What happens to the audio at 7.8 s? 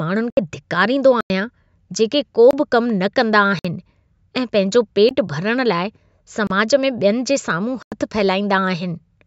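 At 7.83 s the speech drops into a block of digital silence that lasts until 7.92 s, a hole of about 93 ms. The audio there is silent. The length fits a 4096-sample buffer that was not filled in time, so the output got nothing. The sound stops dead with no fade and returns just as abruptly, and the gap is heard as a short, hard dropout.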